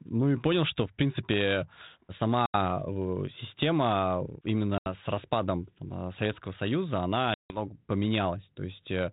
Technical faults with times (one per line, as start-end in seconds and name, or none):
2.46-2.56 packet loss on an ADPCM call
4.78-4.89 packet loss on an ADPCM call
7.34-7.67 packet loss on an ADPCM call